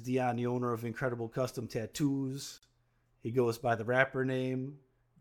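At 2.58 s the speech drops out for about 46 ms, ending at 2.63 s, and then resumes exactly where it left off, with nothing lost. This is a gap at a join of encoded pieces. The audio was encoded in separate sections, about 6 s apart, and joined without trimming, so the encoder's start-up delay and the padding of the final frame both remain as silence. The codec blurs the edges of that silence, making the fully quiet part shorter than 46 ms.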